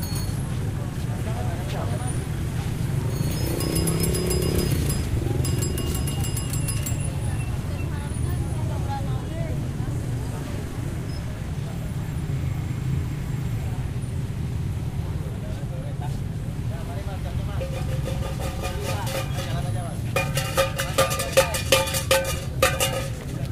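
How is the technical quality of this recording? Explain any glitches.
No glitches can be heard anywhere in this recording of sounds. Nothing in it calls for an explanation.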